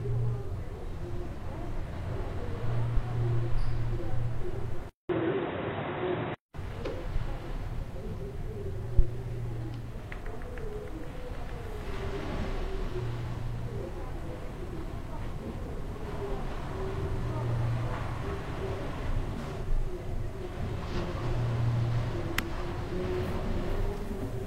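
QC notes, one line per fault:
4.89–6.54 s, input switched to a poorer device: a 200 ms gap opens the section, then the sound turns dull and boxy, with a level shift of around 5 dB and a faint new noise floor. A narrower-band microphone likely took over briefly.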